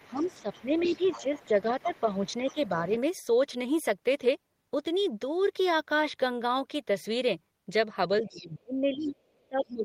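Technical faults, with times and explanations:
0.00–2.68 s, 8.34–8.44 s and 9.40–9.44 s: other side's voice leaking through. A second voice sits under the talker, at about 20 dB down, and nearer 40 dB down at 9.40 s. It likely comes from loudspeaker echo the canceller failed to remove. It sounds faint.
0.06–2.85 s and 8.21 s to the end: speech suppressed in double talk. The talker's level dips while both sides speak, by about 10 dB early on and nearer 25 dB at the end. The echo canceller likely turned down both voices together.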